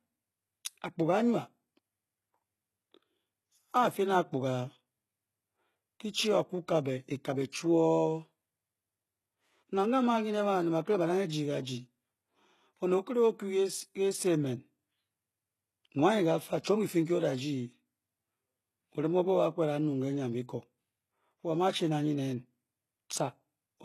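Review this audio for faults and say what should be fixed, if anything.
Throughout the speech the treble is synthetic. S sounds come out gritty and lispy, with a metallic edge, and nothing is present above 12.3 kHz. The likely cause is heavy HE-AAC compression, with the damage pointing to an HE-AAC v2 stream at roughly 16 kbps. Only the lower band is truly coded, and the upper band is rebuilt by copying lower content upward under a coarse envelope, so harmonics above the crossover fail to line up. To prevent it, encode speech with plain AAC-LC or Opus at 48 kbps or more rather than low-rate HE-AAC.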